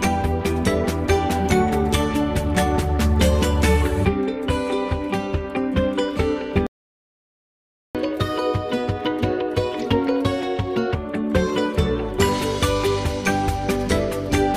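At 6.67 s the player most likely ran dry of buffered data or had its output thread held up, and nothing reached the output until it recovered. The result is a playback stall: the sound cuts off abruptly in mid-flow and stays silent for about 1.28 s, picking up again at 7.95 s. A gap of that length is clearly audible as a break rather than a click or dropout.

From 7.95 s the player works through the backlog it built up during the stall by resampling it faster, producing catch-up at higher speed. The audio runs at 1.25 times normal speed, and because resampling raises speed and pitch together, everything sounds hurried and about four semitones sharp. This lasts three seconds, recovering part of the lost time, and the sound returns to its normal rate and pitch at 10.95 s.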